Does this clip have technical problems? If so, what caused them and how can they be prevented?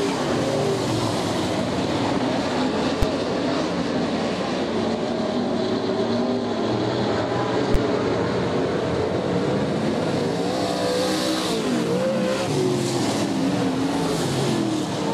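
Yes. There are two bursts of invalid numbers at full scale, at 3.02 s and 7.74 s, each a single sharp bang. A calculation produced infinite or invalid values that were clamped to the extreme positive or negative level, pinning the output for about 5.8 ms and 11.6 ms, which fits 256-sample and 512-sample processing blocks. On the waveform each shows as a flat slab at one extreme value, beyond the audio's peaks. On a spectrogram it appears as a bright vertical stripe across all frequencies. To prevent this, check each block for NaN or infinite values and replace them with silence or the last good samples before the output stage.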